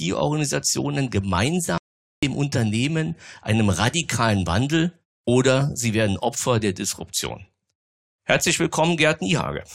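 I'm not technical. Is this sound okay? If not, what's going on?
No. There is an audio dropout to silence from 1.78 to 2.23 s, so just under half a second of speech simply vanishes. The sound stops abruptly, leaving dead silence with no background hiss or room sound, then carries on mid-flow. The likely cause is that the incoming audio was briefly lost, through a loose connection, a failed link or an accidental mute, while the recording kept writing silence. Whatever was said in that gap cannot be recovered.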